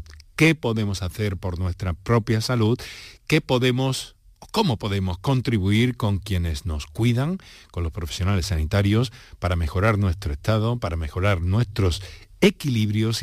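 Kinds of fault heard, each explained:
Nothing here stands out as a fault; the speech comes across without any glitch, dropout or distortion to point to.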